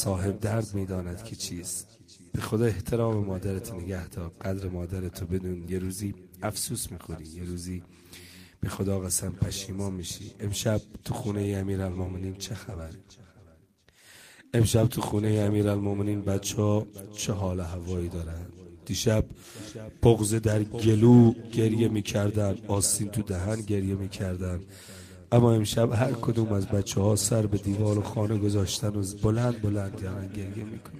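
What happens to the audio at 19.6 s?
Nothing goes wrong at 19.6 s; the audio plays through that moment intact, with no dropout, click or other fault.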